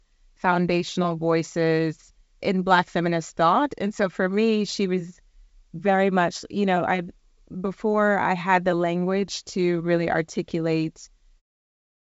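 No faults can be heard anywhere in this recording.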